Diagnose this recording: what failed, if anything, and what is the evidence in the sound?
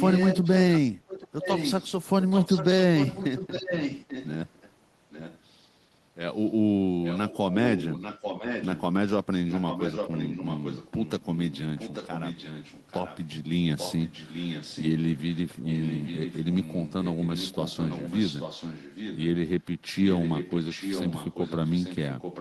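Echo leak in call processing at 0.0–4.71, 5.1–5.39, 7.03–8.82, 9.5–13.22, 13.78–19.25 and 20.04–22.41 s. A copy of the speech trails by 0.84 s and is loudest in the opening stretch. This is likely a loudspeaker-side echo canceller letting microphone pickup return.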